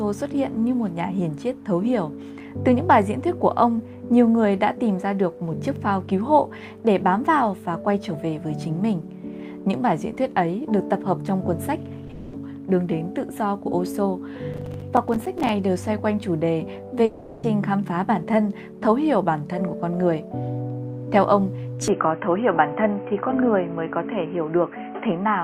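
At 12.07 to 12.11 s, a short concealed packet loss: about 20 ms of audio arrived too late, and the receiver extrapolated the previous sound, leaving a brief smear. Straight after, from 12.11 to 12.35 s, a likely long network dropout: roughly 220 ms never arrived, so concealment stretched the last sound into a fading buzz or hiss with no true silence. The same kind of dropout recurs at 17.05 to 17.45 s, where 380 ms is synthesised.

Between 14.54 and 15.49 s, processor overload crackle: the processor kept missing its buffer deadlines, which fits buffers of around 5 ms, and each miss became a tiny silent gap, together heard as gritty tearing.

From 21.88 s to the end, the input was likely switched to a poorer device. Nothing above 3.2 kHz survives, so the sound turns dull and boxy, with a new noise floor about 35 dB down and no level jump or gap at the switch.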